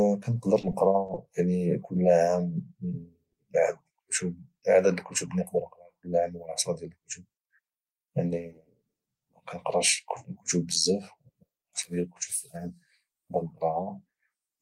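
Repeated packet loss from 0.61 to 1.30 s: several short gaps, the longest about 20 ms, were patched by extending prior sound, leaving the speech choppy with pieces missing.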